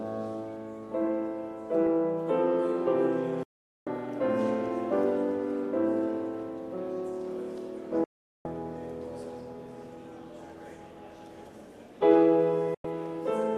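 Digital broadcast dropouts silence the audio at 3.43 to 3.87 s, 8.04 to 8.46 s and 12.74 to 12.85 s, each with a 3 ms fade. The receiver lost valid frames and muted until good ones returned, so the missing sound is unrecoverable.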